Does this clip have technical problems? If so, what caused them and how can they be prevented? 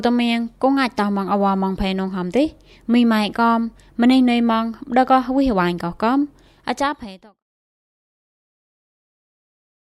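No, nothing here needs fixing or preventing.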